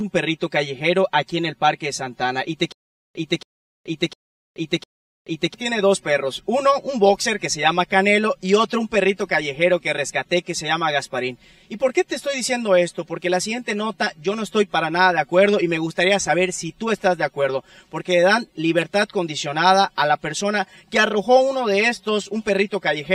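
From the start to the end, the sound has channel delay with comb filtering. One channel arrives a few milliseconds late, around 5 ms, and the two are folded to mono. Shared content cancels at evenly spaced frequencies. The first notch sits near 100 Hz, with more notches stacked above it. The result is hollow and phasey, with a thinned tone that never changes.

From 2.72 s to 5.54 s, there is a stutter with silent gaps. A short burst of about 276 ms plays, then drops to dead digital silence for about 429 ms. The cycle repeats every 0.70 s, four times in all. The likely cause is a stalled player or stream replaying its last fragment on each retry, then running empty. Whatever belonged in that span is gone.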